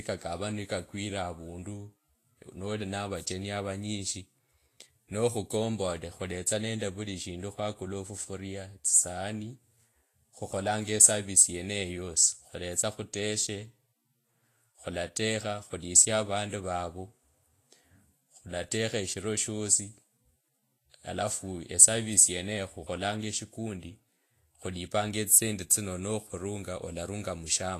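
Throughout the speech, a low-bitrate encode, likely Vorbis compression at around 32 kbps, has quantised the treble too coarsely. Nothing remains above about 14.2 kHz, and the upper detail is replaced by hissy, grainy noise, roughening vowels and blurring consonant attacks.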